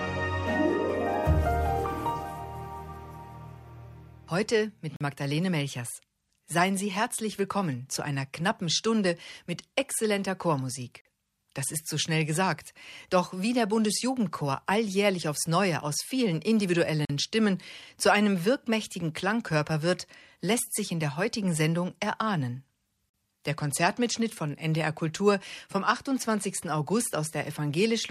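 Four hard-edged holes of silence, each 44 ms long, interrupt the sound at 4.96, 11.01, 17.05 and 23.10 s. This is a gap between chunks: the audio arrives in 6-second blocks, and silence is inserted at each join, with no content lost.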